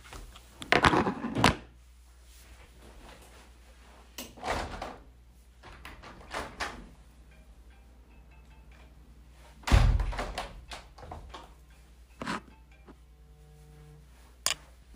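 A steady mains hum at 60 Hz sits under the sound from start to finish at roughly 25 dB down, likely from a ground loop or nearby transformer.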